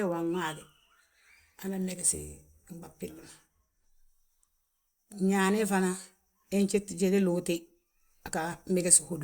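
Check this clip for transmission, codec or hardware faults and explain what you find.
Nothing stood out on listening to this speech recording.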